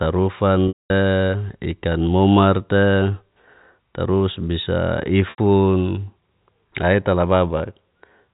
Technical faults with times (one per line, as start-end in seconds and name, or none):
0.68-0.90 packet loss with pitch repetition
5.30-5.38 packet loss with pitch repetition